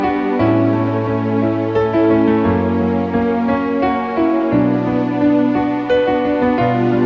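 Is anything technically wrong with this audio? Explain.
No, nothing here stands out as a technical problem; it all sounds just as it should.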